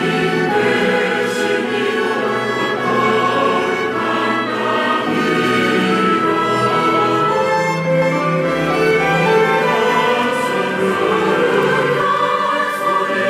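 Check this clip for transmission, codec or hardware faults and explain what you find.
From 8.02 to 12.02 s there is a doubled audio track. A full-band copy trails by about half a second, a few dB quieter, likely from a second capture path. It starts and stops abruptly with no decay.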